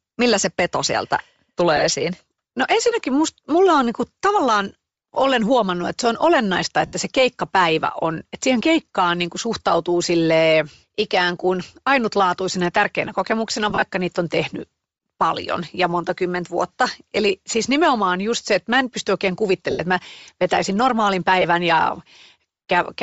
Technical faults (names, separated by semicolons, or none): Bluetooth LC3 compression; lost LE Audio frames